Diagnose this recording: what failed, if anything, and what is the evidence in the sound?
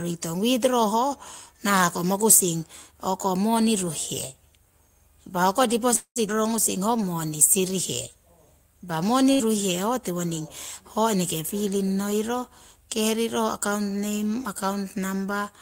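Call audio freeze at 5.95 to 6.19 s: the last sound is held as a fading buzz that drops to silence for about 100 ms, then resumes with nothing lost. This is likely a network stall that emptied the jitter buffer.

Skip ahead at 6.28 to 6.32 s, in the network and jitter buffer stage: playback jumps forward, dropping roughly a tenth of a second. Unlike a freeze, there is almost no gap.

Jitter buffer slow-down from 6.36 to 7.72 s, in the buffer stage: speech runs at 93% speed with unchanged pitch, because repeated pitch periods add 99 ms to rebuild the reserve.

Burst of packet loss at 9.33 to 9.42 s, in the network stage: a 70 ms fading concealment fill covers 60 ms of speech that never arrives. Unlike a freeze, audio is actually missing.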